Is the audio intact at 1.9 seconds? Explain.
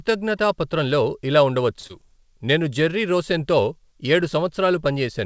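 No. From 1.87 to 1.91 s, just after "పత్రంలో ఇలా" and before "'నేను జెర్రీ రోసెన్తో ఏడు", there is a short concealed packet loss. About 20 ms of audio never reached the decoder. The receiver extended the preceding sound to fill the gap and blended back, leaving a brief smear or wobble where that sliver is gone.

Just before that, from 1.80 to 1.85 s, a short stall from a late packet occurs. The jitter buffer ran dry, so the last sound was held for about 32 ms until the packet arrived. Nothing is lost, but the sound lingers slightly too long with a faint buzzy dip.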